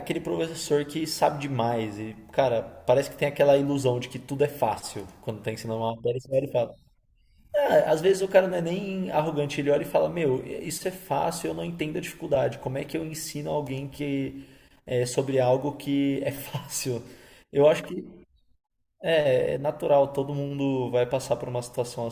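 Speech recording with no audible technical faults.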